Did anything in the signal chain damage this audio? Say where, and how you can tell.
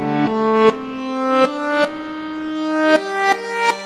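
Yes. Between 0.49 and 0.66 s the sound briefly hangs: one moment is held too long, with a faint buzzy, slightly dipped quality, and then the audio resumes exactly where it left off with nothing skipped. This is a short stall from a late packet at the network stage. A packet arrived behind schedule, the jitter buffer ran dry, and the receiver stretched the last sound for about 41 ms until it came in. That pushed the rest of the audio 41 ms later.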